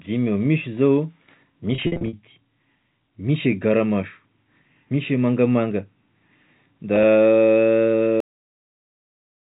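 Packet loss with pitch repetition hits from 1.75 to 2.13 s and again from 6.96 to 7.04 s. In the first stretch, about 250 ms of audio goes missing in gaps scattered across 380 ms, the longest lasting 50 ms. The pattern fits small packets of around 10 ms each. To cover each hole, the receiver loops the last pitch cycle it received, so the speech takes on a held, buzzy, slightly robotic quality. The second event is much lighter, with about 30 ms lost across 80 ms and no gap longer than 10 ms, and it sounds like a slightly held, buzzy note.

The cut-off end comes at 8.20 s. The final buffers were never played out, so the speech stops abruptly mid-sound and drops straight into digital silence for the remaining second or so. There is no natural decay. Up to that point the narrow, telephone-band G.711 character, with nothing above 4 kHz, comes through.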